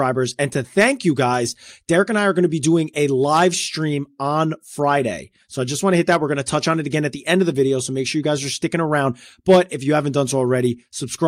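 No technical faults are audible.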